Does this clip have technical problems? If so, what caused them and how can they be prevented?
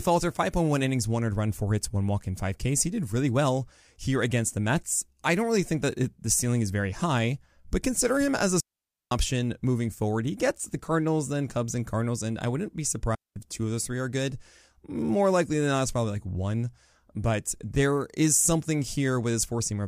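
Yes. Digital wireless dropouts at 8.60 s (after "consider him as a", about 0.51 s) and 13.15 s (after "and I wouldn't be", about 0.21 s): the receiver lost too much data and muted with a very short fade, leaving clean near-silent holes with no noise burst. Keeping line of sight, shortening transmitter distance and avoiding crowded frequencies prevents this.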